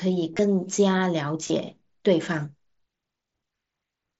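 At 0.33 to 0.39 s, and again from 1.47 to 1.50 s, the speech shows concealed Bluetooth headset packet loss. Packets from the headset went missing, and the phone filled each gap by repeating a recent stretch of waveform. On a waveform those stretches show as copied, evenly periodic cycles at full level. A spectrogram shows flat, comb-like harmonic stripes in place of moving formants, with a short buzzy hold and a slight warble where real speech resumes.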